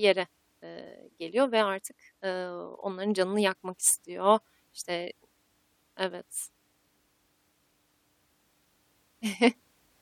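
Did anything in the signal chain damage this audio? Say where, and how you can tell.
No, nothing in the signal chain damaged this audio.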